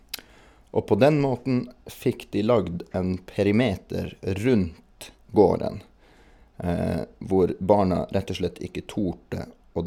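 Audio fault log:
No faults heard in the speech at any point in the clip.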